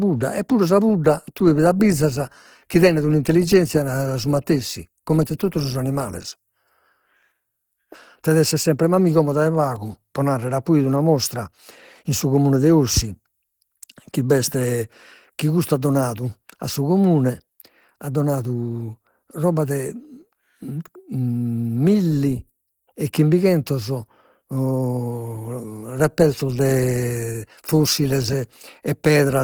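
A speech recording with Opus compression running throughout, likely from an encoder starved to a low rate near 16 kbps and sitting in its hybrid mode, where a speech coder carries the lower band and a transform coder fills the top. The damage is plainly audible for the whole clip: the speech sounds hoarse and somewhat muffled, with a grainy, rough texture where upper bands are approximated with noise. The audio still extends to about 20.3 kHz.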